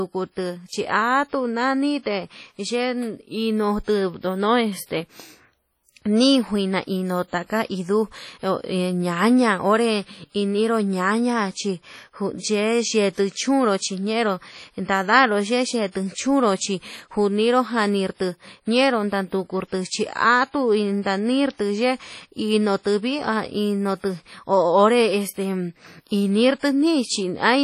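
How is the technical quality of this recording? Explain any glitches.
The recording is heavily degraded by codec compression from start to finish, most likely WMA compression. Throughout the speech, a washy, ringing smear hangs around each syllable, and a hiss rises and falls with the level. Long transform blocks spread quantisation noise over tens of milliseconds, and weak spectral lines are dropped, consistent with a bitrate near 32 kbps. Nothing sounds above 16.5 kHz. Unlike broadband background noise, the hiss breathes with the signal rather than staying constant.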